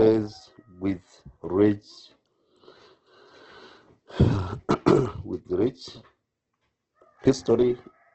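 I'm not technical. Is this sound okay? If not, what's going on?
No, not quite. From start to finish the speech sounds grainy and rough, like it's been squeezed too hard, and there's nothing above 8.1 kHz, so it lacks crispness and air. That's the mark of Opus compression, likely set very low: the encoder keeps the overall shape of the sound but fills in missing detail with noise-like guesses, which is where the gritty texture comes from, and at such a low setting it also cuts off the top end, which is why it sounds dull.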